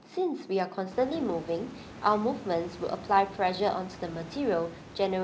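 Speech recording, with no technical faults to report.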